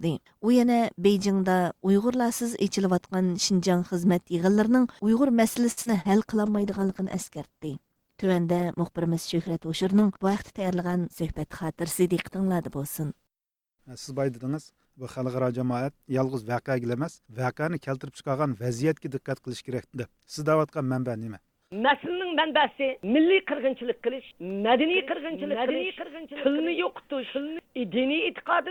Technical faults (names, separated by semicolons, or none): short stall from a late packet; short concealed packet loss; call bitrate drop; jitter buffer speed-up; doubled audio track